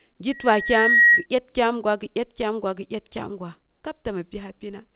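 From 0.31 to 1.26 s, a loudspeaker feedback squeal appears: a 1.9 kHz loop tone swells for under a second to about 10 dB above the speech, a brightening horizontal spectrogram line.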